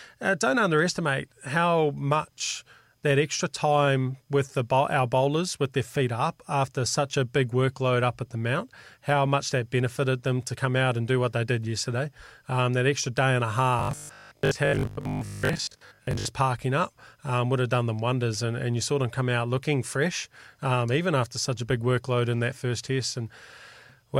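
From 13.79 to 16.27 s, between "extra day and a" and "parking up um would", the speech becomes a rigid metallic buzz at 50 Hz. This is robotic sound from repeated short buffers, likely a 20 ms chunk replayed while most real audio is skipped. The spectrogram shows evenly spaced 50 Hz harmonic lines, and the waveform shows identical repeating cycles.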